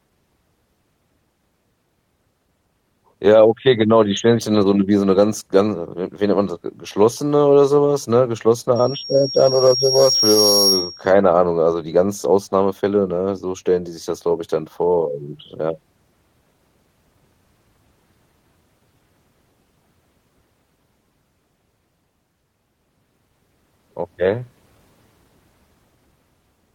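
After "so was ne geschlossene", 8.75–11.12 s: loudspeaker feedback squeal, the mic catching its own speaker, so a 5.6 kHz tone swells over a couple of seconds until it rides above the speech.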